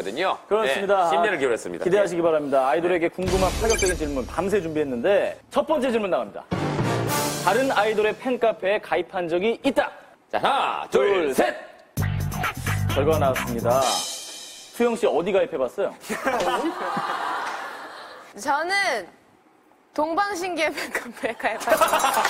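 No technical faults can be heard anywhere in this audio.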